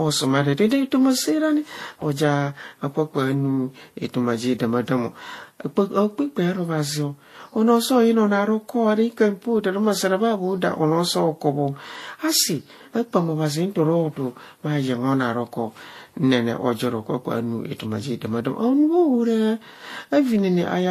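The speech was likely passed through two lossy codecs in turn, a low-rate Vorbis encode and then an MP3 encode, a case of transcoding between lossy codecs. The artefacts fit roughly 35 kbit/s followed by 64 kbit/s. Throughout the clip, nothing remains above 14.2 kHz, so the top end is dulled. The smeared, swirly texture of the first encode sits under a second layer of MP3 graininess, and the two blend into a hollow, busy roughness.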